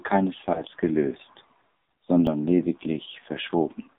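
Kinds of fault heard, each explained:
AMR narrowband mobile codec: Throughout, the speech passes through AMR-NB at a low 5.9 kbps, which squeezes the band to about 150 Hz to 3.7 kHz and rebuilds the voice from a few pulses per subframe, so it sounds heavily buzzy, thin and synthetic.
Lost AMR speech frames: From 0.54 to 0.62 s, one 20 ms frame fails to arrive intact, so the decoder fills the gap by reusing the previous pitch and vocal tract settings at reduced gain, heard as a brief dip or warble before the voice recovers roughly.
Dropped buffer (overrun): At 2.27 s there is a sudden jump in the sound, where about 10 ms of audio vanishes and the surrounding pieces butt together; the likely cause is samples being overwritten by the hardware before the program collected them.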